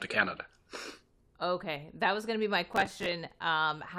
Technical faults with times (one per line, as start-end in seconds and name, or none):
2.73-3.12 processor overload crackle